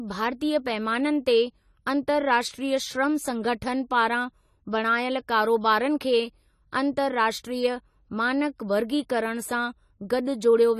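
From the first second to the end, the speech carries plainly audible codec damage, and it sounds like AAC compression, likely AAC-LC squeezed to a low rate, which fits something around 32 kbps. Nothing survives above 14 kHz, so the top is dull and airless. With too few bits per frame, the encoder has dropped or patched spectral bands, leaving sibilants fizzy and sustained vowels with a warbling smear.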